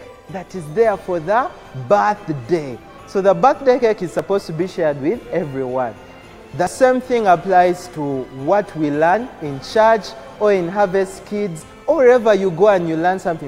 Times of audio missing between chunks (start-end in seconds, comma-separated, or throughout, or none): 1.72, 4.19, 6.67, 9.14, 11.62